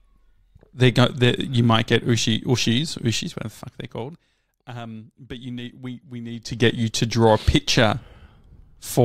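From 3.16 to 4.59 s, the speech fades down by roughly 20 dB with zipper noise. The gain drops in 1 dB steps, around fifteen per second, with no smoothing between them. Each jump clicks, so a fine ticking rides on the voice as it falls. From 6.30 to 6.66 s, the level climbs back by about 20 dB in the same 1 dB steps, now near fifty per second, heard as a quicker zip.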